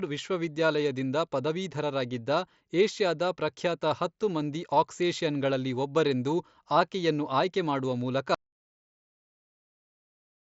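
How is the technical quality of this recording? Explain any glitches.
The recording has one clear glitch: the sound cuts out completely near the end and never returns, heard through the wideband character of a Bluetooth mSBC headset link, which limits the speech to about 8 kHz.

Audio dropout to silence, from 8.35 s to the end: right after "ಆಕೆಯನ್ನು ಆಯ್ಕೆ ಮಾಡುವ ಮೂಲಕ" the speech stops mid-flow and turns to silence with no room tone at all. The input most likely lost its connection or was muted while the recorder kept writing silence, so whatever followed for the last two seconds or so is simply gone.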